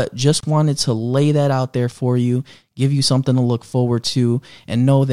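At 0.40 s the speech was encoded as separate pieces and joined without trimming the encoder's start-up delay and end padding, leaving a gap at a join of encoded pieces. The result is a 28 ms gap, running to 0.43 s, cut into otherwise continuous speech with smeared edges. The speech then resumes exactly where it broke off, on "wanted to lay that", as if nothing was lost.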